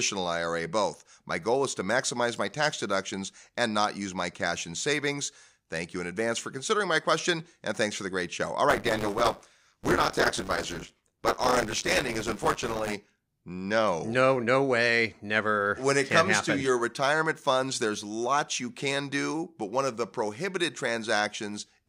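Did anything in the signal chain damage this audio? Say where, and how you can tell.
Yes, at the driver or buffer stage. Buffer tearing from 8.69 to 12.93 s gives a 100 Hz robotic buzz. About a fifth of each period replays audio roughly 20 ms old.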